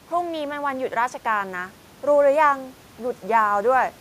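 No technical faults are audible.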